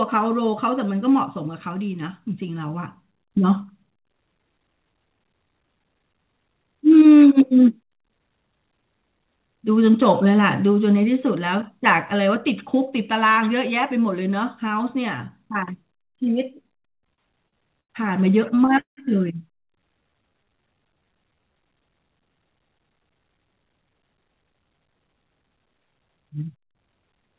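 Between 16.69 and 17.92 s the speech catches and drags through nine brief stalls, the longest 90 ms, with about a fifth of that stretch filled in. From 18.56 to 18.99 s four more stalls follow, one lasting 175 ms, so half of that short span is concealed. These are repeated stalls (stutter): packets arrived late, the jitter buffer ran dry, and the receiver stretched out the last sound until fresh audio came. Nothing is lost, but the flow halts and limps.

From 19.80 to 21.54 s the speech slows to 86% of normal pace with the pitch unchanged, drawn out by 246 ms. This is a jitter buffer slow-down: short of reserve, the receiver repeated individual pitch periods to rebuild its cushion.

From 23.15 to 25.95 s the delivery sounds hurried, running at 114% speed with the pitch intact and around 0.4 s trimmed away. This is a jitter buffer speed-up: with too much audio queued, the receiver cut out small pitch-period pieces to bring the delay back down. 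Throughout, nothing sounds above 4 kHz, which fits the narrowband G.711 A-law call path.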